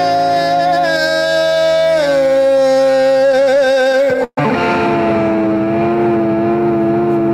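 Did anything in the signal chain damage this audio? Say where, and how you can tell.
Yes. Between 2.92 and 4.38 s the music suffers repeated stalls (stutter) at the network jitter buffer: 21 brief holds, the longest 129 ms, stretching the last sound to cover about 23% of that span. No audio is missing, unlike packet-loss dropouts; it simply drags.

From 5.36 to 6.60 s a jitter buffer slow-down repeats tiny pitch periods to rebuild reserve, adding 134 ms so the passage runs at 90% speed. The pitch stays put, which separates it from a clock or tape-speed error that would flatten it.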